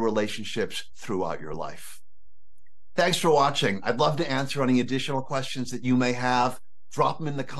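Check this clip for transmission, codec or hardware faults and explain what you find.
One fault is present: a DC offset that runs for the whole clip. Somewhere in the chain, most likely a converter or input stage adding a fixed voltage, the entire waveform sits displaced from zero by a constant amount, at about -34 dBFS. That shift is inaudible as such, but it eats a little headroom on one side of the waveform and appears as steady energy at the very bottom of the spectrum, right at 0 Hz.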